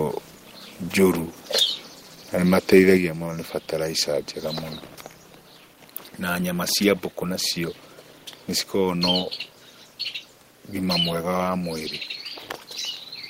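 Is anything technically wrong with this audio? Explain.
Yes. At 2.97 s the microphone volume steps down by about 5 dB: speech and background drop at once, likely the call software lowering the input gain.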